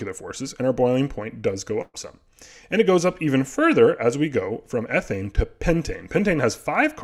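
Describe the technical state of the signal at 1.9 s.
At 1.9 s you're right in the middle of a burst of packet loss that runs from about 1.81 to 1.97 s. A run of packets never arrived in time, so the receiver kept extending the last bit of sound it had for roughly 120 ms, turning it down as it went, and it falls to silence for the final 30 ms or so. When audio picks up again, about 120 ms of the original has simply gone missing.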